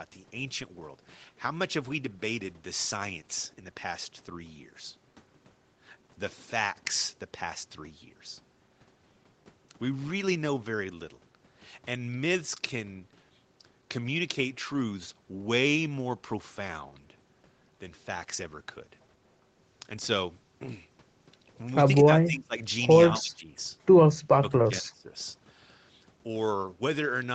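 Three times the speech sinks: 22.24 to 22.55 s, 23.17 to 23.52 s, and 24.23 to 25.12 s, dipping by about 20 dB and then about 25 dB at the deepest. This is likely speech suppressed in double talk, the echo canceller turning down the talker while the far side spoke.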